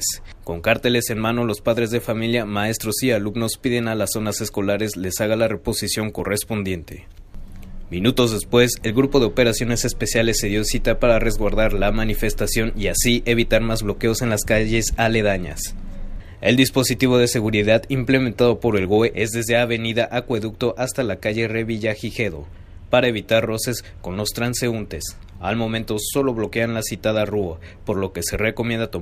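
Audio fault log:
6.19 s, overlap between stream segments: a tiny skip where roughly 17 ms of audio is missing. Two adjacent segments claim overlapping time stamps, so the player discards the overlapping portion as duplicate, and the waveform jumps across the gap. The timing fits a 2-second segment boundary.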